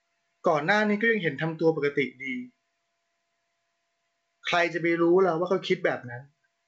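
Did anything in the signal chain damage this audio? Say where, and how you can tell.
No: the speech shows only the signature of G.722 wideband telephone coding at 64 kbit/s, a band limit with nothing above 7.8 kHz and at most a faint trace of the codec, and no stage in the chain has audibly damaged it.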